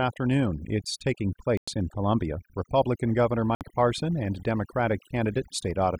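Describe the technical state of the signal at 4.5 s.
At 4.5 s, as throughout, overdone noise removal cuts bands near the noise estimate: twinkling specks over near silence, unlike a gate's whole-signal muting.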